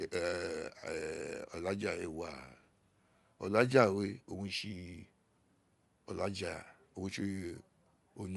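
A speech recording with plainly audible codec damage from start to finish. Nothing reaches above 11.5 kHz, and the sound carries a coarse transform-codec texture. This is likely Bluetooth LC3 compression, which fits 10 ms frames at around 48 kbps.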